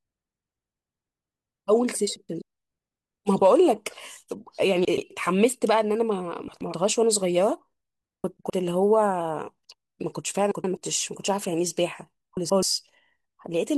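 Frames out of order occur at 2.16, 4.85, 6.48, 8.24, 10.51 and 12.37 s. Two adjacent 128 ms blocks swap places, which fits runs of four frames. Each quarter-second stretch plays with its halves exchanged. It sounds like a garbled flutter.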